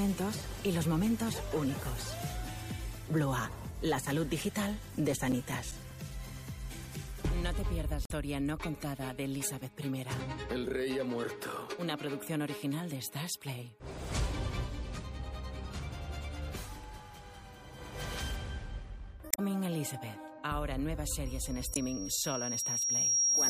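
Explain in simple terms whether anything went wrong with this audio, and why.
Throughout the clip the sound is watery and swirly, with dulled treble and smeared attacks. The likely cause is heavy MP3 compression stripping out detail to save space.

From 4.53 to 6.50 s there are CD scratch ticks: eleven brief clicks, roughly five or six per second. They come from a disc blemish passing the laser on each turn.

Damaged data in a compressed stream causes short glitches at 8.03–8.11 s, 19.28–19.39 s and 21.73–21.78 s. At each point the decoder hit corrupted frames and had to resynchronise.

From 21.25 s to the end, a loudspeaker feedback squeal at 5.6 kHz builds over about two seconds. A microphone is picking up its own loudspeaker and reinforcing that pitch.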